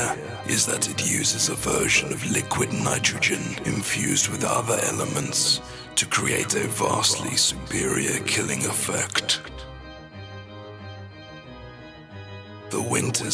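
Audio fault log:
No fault in this clip's audio log.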